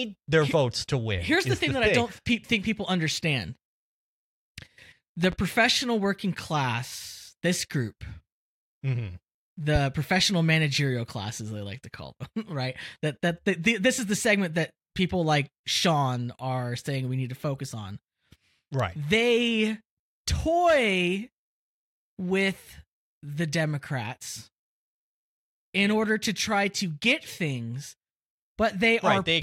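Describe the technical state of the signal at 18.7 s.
At 18.7 s the speech signal is intact, with no audible dropout, clipping, distortion or other fault at that moment.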